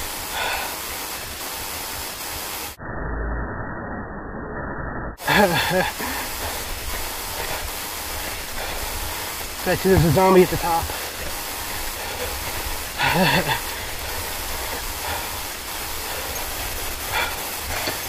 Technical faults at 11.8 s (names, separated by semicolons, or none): sample clock jitter